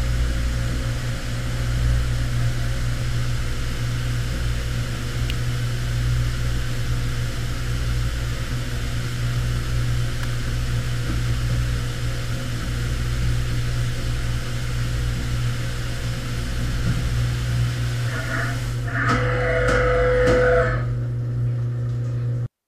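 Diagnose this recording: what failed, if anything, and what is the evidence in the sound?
Two sharp snaps at 5.30 s and 10.23 s, peaking around -10 and -15 dBFS, are electrical switching spikes, likely a nearby switch or motor arcing into the analogue wiring. Each appears as a thin broadband vertical stripe on a spectrogram and a lone needle on the waveform.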